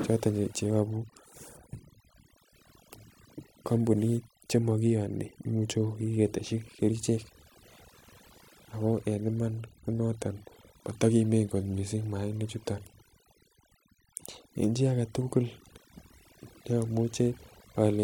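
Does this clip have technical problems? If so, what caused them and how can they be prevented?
Yes. Overdone noise removal runs throughout: the noise reducer cuts individual frequency bands whenever they sit near its noise estimate, so the background drops and breaks up into twinkling specks, and quieter speech detail goes too. Prevent it by using gentler reduction settings.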